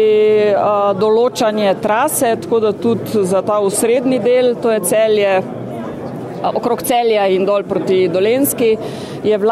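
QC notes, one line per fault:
2.34–3.97 s, drift correction step: the audio slows by 5.83% and drops 104 cents, about a semitone flat, then snaps back to normal speed and pitch. This is likely a clock-matching resampler making one abrupt rate change to refill its buffer.
6.26–7.29 s, drift correction step: the opposite jump, 5.83% faster and 98 cents sharp, then a snap back. Here the buffer is likely being drained.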